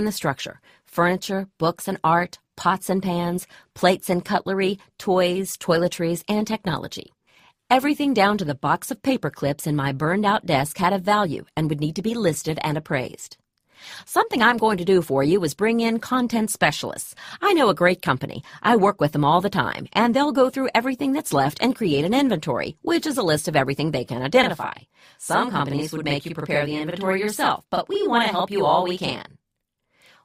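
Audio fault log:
7.03–7.07 s short stall from a late packet: the last sound is held about 16 ms while the jitter buffer waits, nothing lost; a smeared, flat spectrogram patch.
24.44–30.25 s channel delay (doubling): one channel lags 42.7 ms, which fits a 2048-sample buffer, so the mono sum doubles; waveform shows offset repeats, spectrogram dense comb notches.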